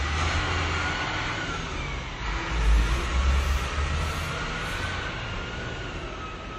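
Transcoding between lossy codecs runs through the whole of this everyday-sound clip. Nothing survives above 15.7 kHz, and low-bitrate artefacts sit under a second codec's own coarseness, likely from an Opus encode at about 24 kbit/s re-encoded to WMA 1.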